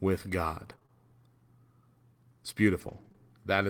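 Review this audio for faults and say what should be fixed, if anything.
Brief ticks and small smeared hiccups pepper the speech between 0.71 and 3.16 s. These are scattered short gaps: about seven lost or late packets, none longer than around 20 ms, with 120 ms missing in total, each patched by extending the preceding sound. Adding a larger jitter buffer and forward error correction on the network path would prevent it.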